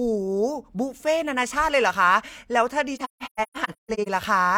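From 2.96 to 4.08 s the speech breaks up with AAC frame loss with muting. Lost frames decode as silence. Overlapping windows fade each gap in and out softly. About 768 ms goes missing, in holes up to roughly 150 ms.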